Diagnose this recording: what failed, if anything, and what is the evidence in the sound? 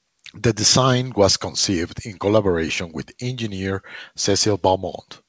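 Nothing in the recording points to a failure at any stage. The speech arrives over a call path whose band stops at 8 kHz, which fits a wideband codec such as G.722, and its coding adds only its usual coding noise.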